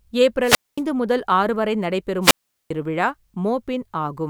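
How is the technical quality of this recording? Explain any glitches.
The recording has two wireless microphone squelch dropouts, at 0.42–0.82 s and 2.21–2.71 s. Each time, the radio link fades and hiss swells. Then the receiver's squelch mutes the output for 227 ms and 397 ms. The speech returns after each silent gap.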